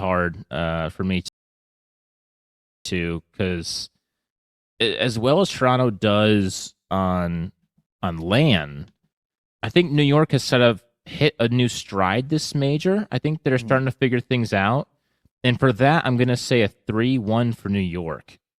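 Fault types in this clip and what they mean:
rebuffering stall: after "uh for me" the speech falls silent at 1.28 s and resumes intact at 2.85 s; the player ran out of downloaded audio, adding 1.57 s.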